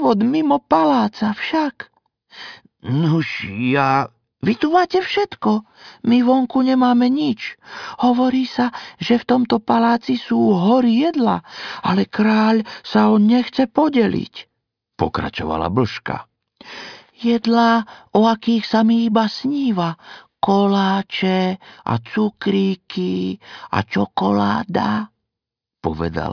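No technical faults can be heard anywhere in the recording. Nothing in it points to a dropout, a glitch or a break at any moment.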